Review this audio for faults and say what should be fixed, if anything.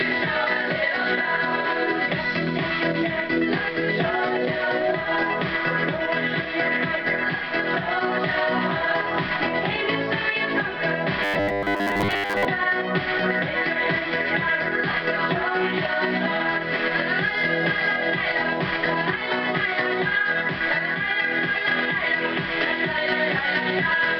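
From 11.23 to 12.45 s the sound collapses into a rigid, metallic buzz pinned at 100 Hz that only loosely follows the underlying audio. This is robotic sound from repeated short buffers. Audio is likely arriving too seldom, so playback loops the last chunk for most of the span, which fits a 10 ms buffer. Unlike codec warble, the buzz sits at a fixed rate. Enlarging the playout buffer and stabilising upstream delivery would prevent it.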